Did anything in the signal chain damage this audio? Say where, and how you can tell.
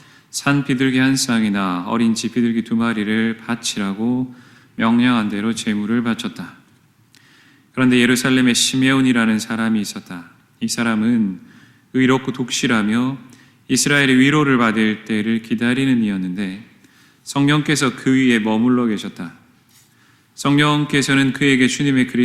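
No, nothing in the signal chain damaged this audio.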